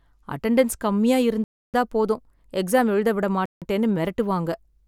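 Bluetooth stall at 1.44 to 1.74 s, after "அட்டெண்டன்ஸ் கம்மியா", and again at 3.46 to 3.62 s, after "போதும் எக்ஸாம் எழுத விட": this speech clip drops to silence for about 0.3 s and then 0.16 s before resuming, likely because radio interference delayed packets and the headphones' buffer ran empty.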